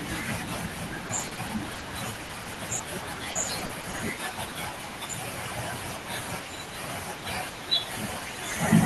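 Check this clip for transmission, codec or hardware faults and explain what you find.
Repeated packet loss (robotic sound) affects the speech in three bursts: 1.07–1.83 s, 2.27–2.81 s and 3.31–4.01 s. Packets went missing again and again, and each hole of up to 40 ms was patched by stretching the last sound, giving choppy speech with fragments missing.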